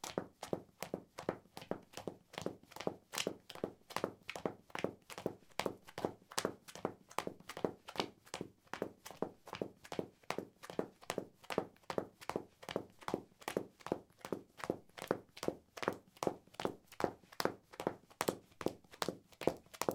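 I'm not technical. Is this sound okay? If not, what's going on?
Yes, this sound is okay, and there's nothing going on that needs fixing.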